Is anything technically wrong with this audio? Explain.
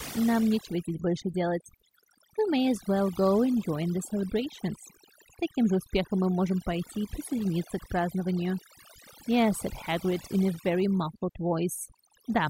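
Yes. Overdone noise removal runs through the whole speech clip: a noise reduction process set far too aggressively cuts individual frequency bands whenever they sit near its noise estimate, taking quiet speech detail with them. The background drops and breaks up into twinkling specks.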